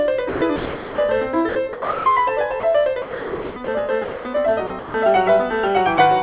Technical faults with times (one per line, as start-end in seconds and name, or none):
0.29-0.98 sound chopped by the voice detector
1.49-2.06 sound chopped by the voice detector
2.60-2.63 sound dropped by the voice detector
3.02-3.68 sound chopped by the voice detector
4.04-4.25 sound dropped by the voice detector
4.67-4.94 sound chopped by the voice detector